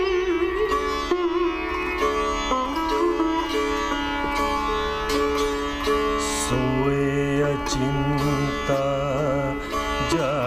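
No faults are audible anywhere in the recording.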